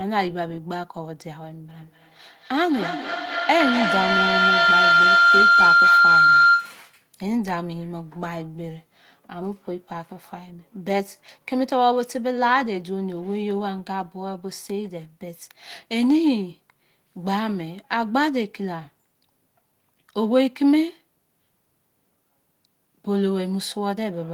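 From 1.78 s to 6.97 s a feedback howl takes over: a tone near 1.5 kHz swells until it peaks about 6 dB above the speech, pulsing roughly every 200 ms. Sound is looping from loudspeaker back into a microphone with gain on each pass, so the repeats grow and narrow to one favoured pitch. Ordinary echo would instead fade with each return, and a fixed interference tone would hold steady rather than build and throb.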